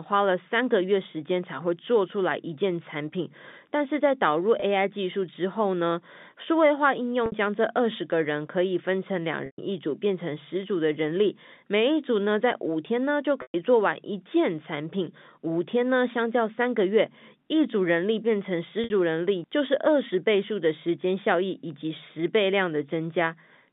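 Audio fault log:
4.6 s (20 ms); 7.26 s and 18.84 s (60 ms); 9.46 s and 13.42 s (120 ms): packet loss with pitch repetition. The last pitch period is repeated to fill the gap. The 20 ms loss sounds like a brief buzzy hold. The 120 ms losses fade toward silence before speech cross-fades back.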